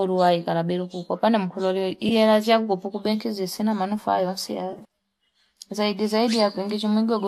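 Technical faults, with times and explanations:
2.09 to 2.12 s, AAC frame loss with concealment: a brief smeared, phasey blur lasting about 20 ms, which fits two lost 10 ms frames. The decoder filled the gap by reusing the last good spectrum, likely from low-delay AAC (AAC-ELD) at lightly damaging settings.
4.73 to 4.82 s, AAC frame loss with concealment: a patchier stretch of about 80 ms. Roughly 50 ms is missing in scattered gaps, the longest about 30 ms, so the rebuilt spectrum recurs as noisy, washy patches.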